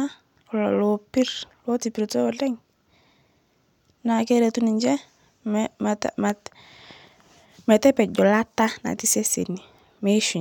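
At 6.30 to 6.32 s a single loud pop, well above the speech, likely from an electrical pulse. Unlike a dropout, the speech carries on underneath.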